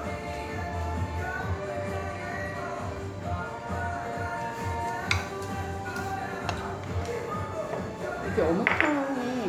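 Channel delay (comb filtering) affects this everyday sound recording from 1.96 to 2.96 s. One channel lags by roughly a single sample, about 0.02 ms, and summing to mono cancels the shared content near 20 kHz, leaving a dull top end.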